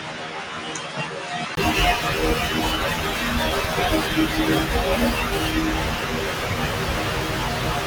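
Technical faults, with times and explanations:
0.00–1.57 s, input switched to a poorer device: the opening speech sounds duller and boxy, with nothing above 9.8 kHz, a few decibels quieter, and carrying its own faint background noise roughly 40 dB under the signal. A 20 ms gap at 1.57 s precedes fuller, brighter sound. On a spectrogram the top band is empty until 1.57 s, then filled. The waveform shows lower amplitude before a brief flat gap. The cause is likely a change of capture device.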